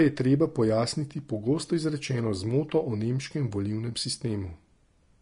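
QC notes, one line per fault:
Throughout, Vorbis compression: The speech has no content above 10.6 kHz, so the top octave is missing and the sound is dull. The remaining treble is hissy and grainy, and sibilants come out as rough noise rather than clean detail. The coder has likely quantised the high bands so coarsely that fine structure is replaced by noise of similar energy. The damage is plainly audible and fits a low bitrate of about 35 kbps.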